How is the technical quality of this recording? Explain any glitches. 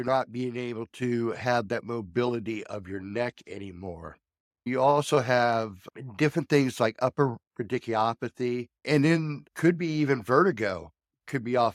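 At 1.02 s the microphone volume stepped up by about 5 dB, so everything after "not being able" jumps in level at once, voice and background together.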